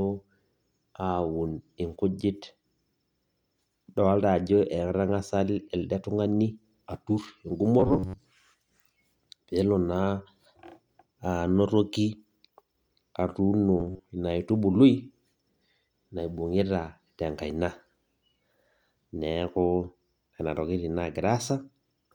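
Likely starved buffers repeating short chunks for about half the audio give robotic sound at 7.80–8.20 s and 13.80–14.10 s: a rigid metallic buzz near 94 Hz over the speech.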